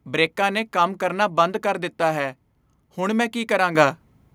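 A speech recording with one clear fault: the microphone volume stepped up at about 3.75 s, where everything jumps in level by about 8 dB at once. The call software judged the input too quiet and raised the device's capture gain in a single step. Voice and background noise rise together. On a waveform the envelope steps abruptly higher. On a spectrogram every frequency band brightens at the same instant, including the noise floor.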